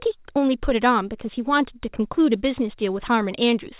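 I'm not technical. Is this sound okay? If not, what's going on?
Yes, this speech clip has no faults to worry about. It went through a normal call connection, which is why it has the narrow, telephone-like sound of a line that carries nothing above about 4 kHz.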